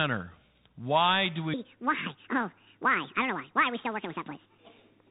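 From the start the whole clip goes through a Bluetooth CVSD headset codec: everything above 3.8 kHz is gone, s sounds come out scratchy, and there's a grainy hiss under the speech. From 1.54 s to the end, a section runs at the wrong speed, 1.72 times too fast, so the speech jumps up roughly ten semitones and sounds rushed, most likely from playback against the wrong clock.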